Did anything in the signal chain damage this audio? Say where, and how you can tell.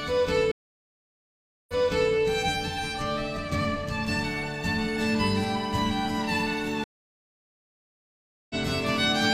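Yes. The network connection dropped twice, causing a stream reconnect each time: playback went silent, rejoined and restarted its decoder mid-stream. From 0.51 s, 1.17 s of silence ends with the sound resuming 0.46 s earlier, repeating material. From 6.84 s, 1.66 s of silence ends roughly 0.7 s later, skipping material.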